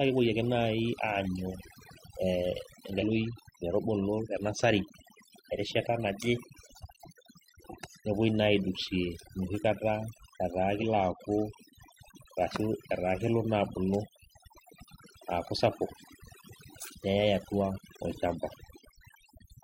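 Speech recording with overdone noise removal throughout: over-aggressive band-by-band suppression leaves near-silent gaps speckled with twinkling artefacts, seen on a spectrogram as blotchy, isolated time-frequency islands. Damaged data in a compressed stream produces brief garbled blips at 2.98–3.04 s, 10.78–10.84 s and 15.19–15.25 s, where the decoder misread corrupted frames; each shows as a short broadband smear or abrupt waveform discontinuity about 60 ms wide.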